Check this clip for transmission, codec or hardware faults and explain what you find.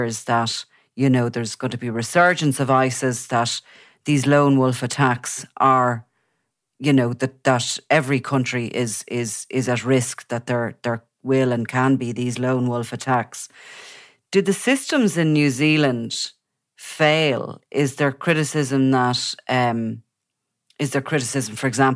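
No faults can be heard.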